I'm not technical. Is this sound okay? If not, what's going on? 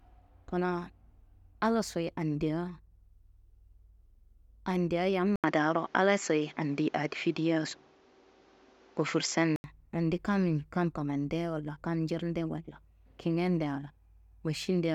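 No. From 5.36 to 9.64 seconds the speech turns dull and boxy after a brief gap. This is likely an input switched to a poorer device.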